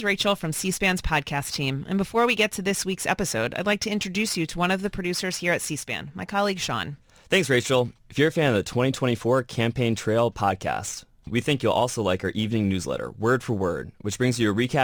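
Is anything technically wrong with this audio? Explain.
Yes. Crude rate conversion runs throughout the speech: a 48 kHz to 44.1 kHz change that drops samples without filtering, leaving error roughly 25 dB down, heard as gritty, inharmonic fizz tracking loud, high sounds.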